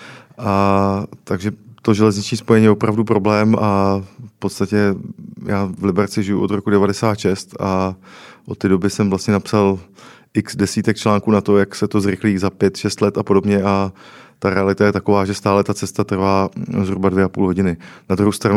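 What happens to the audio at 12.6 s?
Sample clock jitter, from 5.55 s to the end: an unsteady converter clock mistimes samples, adding faint hiss about 55 dB below the signal on louder, brighter speech.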